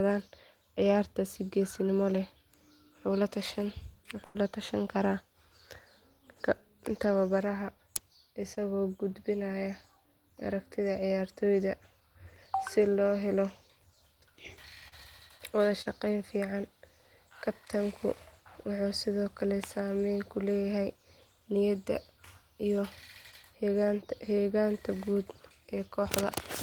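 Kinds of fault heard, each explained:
Burst of packet loss: At 4.25 to 4.37 s, just before "la tashan karaa", about 100 ms of audio never arrived. The receiver stretched the last sound across roughly 93 ms, fading it, before jumping ahead. It is longer than the others and leaves a hole in the speech.
Short concealed packet loss: At 8.55, 14.88 and 15.82 s, gaps of only 20 to 40 ms were patched by continuing the preceding sound and blending back. Each passes as a brief smear or wobble rather than the held, fading dropout heard at 4.3 s.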